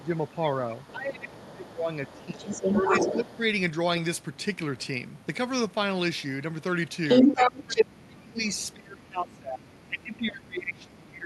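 A second voice, the other side's voice leaking through, is heard faintly, roughly 25 to 30 dB under the speech, at 0.0–0.28 s, 0.81–0.92 s and 1.28–1.72 s. Over the same opening stretch, 0.03–2.48 s, the main speech sinks in pieces by up to about 15 dB, around a second and a half in all. This is speech suppressed in double talk: with both sides talking at once, the echo canceller likely could not separate its own talker from the loudspeaker echo and turned both down. At 2.06–3.37 s the leaked voice rises to about the same level as the speech. From 2.8 to 3.4 s the talker dips again, only about 5 dB this time. The leak comes from the loudspeaker playback reaching the microphone, which the echo canceller likely failed to remove. At 7.08–8.04 s it returns about 10 dB louder than the talker. From 7.23 s to the end the talker is held down by up to about 20 dB, the deepest suppression in the clip.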